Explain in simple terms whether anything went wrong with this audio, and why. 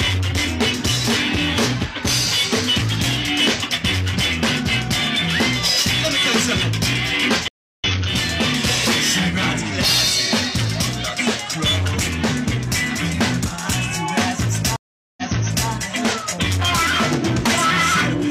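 Stream reconnects occur at 7.48 to 7.84 s and at 14.76 to 15.68 s. Each time, the connection dropped, the player went quiet and then restarted mid-stream. The first gap lasts 315 ms and the sound comes back about a fifth of a second further on, so a small piece is skipped. The second gap lasts 411 ms, and playback resumes 511 ms earlier, repeating half a second of sound that was already heard.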